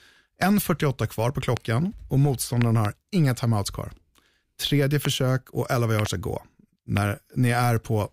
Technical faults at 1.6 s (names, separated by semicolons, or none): loud pop